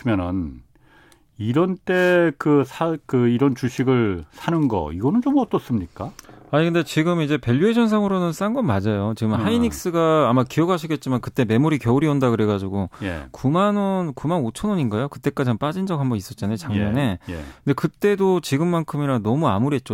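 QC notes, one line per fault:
No faults found in this speech clip.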